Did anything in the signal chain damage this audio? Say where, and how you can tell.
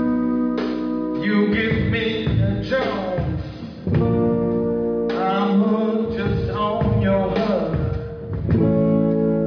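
No, no signal-chain damage heard.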